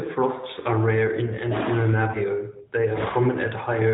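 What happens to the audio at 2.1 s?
A single lost AMR speech frame hits at 2.12 to 2.18 s. The decoder fills the 20 ms gap by repeating the previous pitch and vocal tract settings at reduced gain, giving a brief dip or warble. On a waveform the envelope sags briefly; a spectrogram shows smeared, dimmed harmonics under the narrowband 4 kHz ceiling.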